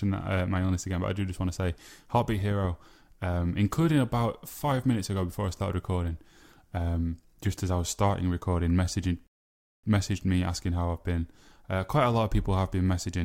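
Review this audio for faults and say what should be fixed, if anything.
At 9.27 s the speech stops dead and falls silent. It picks up again at 9.84 s, exactly where it left off. That is a rebuffering stall. The player used up its downloaded audio and had to wait for more to arrive. Nothing is skipped or repeated. The gap simply adds about 0.57 s of silence to the playback. To prevent it, keep a larger playback buffer and start playing only once enough audio has arrived to ride out network slowdowns.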